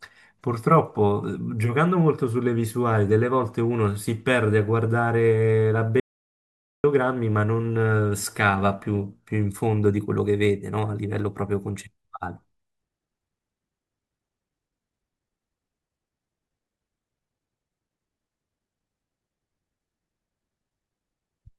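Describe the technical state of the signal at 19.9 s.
At 19.9 s the speech signal is intact, with no fault present at that moment.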